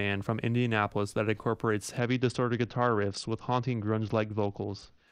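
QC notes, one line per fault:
1.99–5.07 s, Bluetooth SBC bit pool drop: the speech goes dull and gritty, as top sub-bands starve, which fits the bit pool falling to around 8, roughly 72 kbps.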